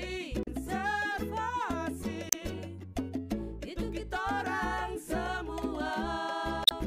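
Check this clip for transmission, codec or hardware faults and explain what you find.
There are three short faults, all from damaged data in a compressed stream, at 0.41 to 0.48 s, 2.29 to 2.35 s and 6.64 to 6.72 s. Part of the encoded stream arrived corrupted, so the decoder could not read those frames properly, lost its place and had to hunt for the next valid frame header before it could continue. Each time, the sound breaks into a brief chirp, squawk, click or short hole lasting roughly 50 to 80 ms.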